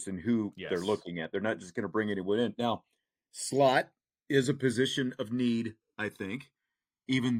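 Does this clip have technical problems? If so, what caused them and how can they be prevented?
Yes, the speech has channels drifting apart the whole way through: the two sides sound like separate devices whose clocks disagree by something like 150 ppm, so the delay creeps up to about a millisecond. Summed to mono, that slides comb notches around, giving slow flanging. Lock both devices to a shared word clock.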